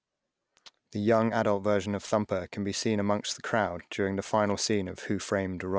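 Downsampling without an anti-alias filter, running through the whole speech clip, causes aliasing. The folding edge sits at 8 kHz, which fits a 48 kHz original cut to 16 kHz. Energy above 8 kHz mirrors back as false, unrelated tones about 20 dB below the speech, making sibilants gritty and metallic, with the spectrum pressed hard against the band edge.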